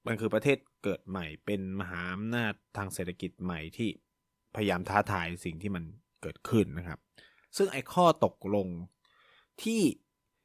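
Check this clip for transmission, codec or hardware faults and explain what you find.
No transmission, codec or hardware faults were found in this speech recording.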